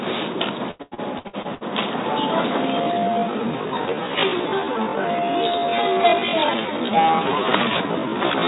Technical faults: repeated packet loss (robotic sound); time-stretched section

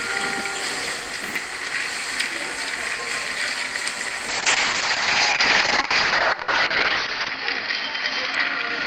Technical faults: call bitrate drop

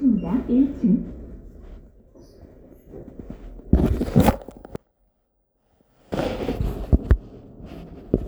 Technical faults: one channel inverted

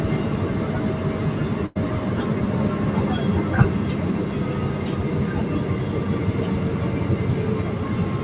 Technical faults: burst of packet loss

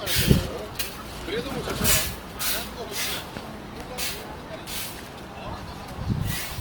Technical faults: Opus compression

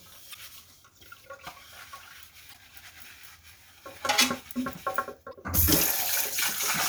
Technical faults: damaged data in a compressed stream

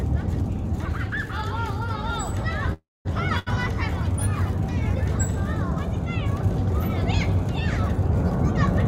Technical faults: call audio freeze; short stall from a late packet

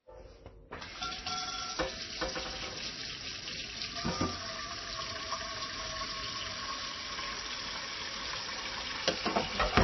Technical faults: MP3 compression; loose connector crackle

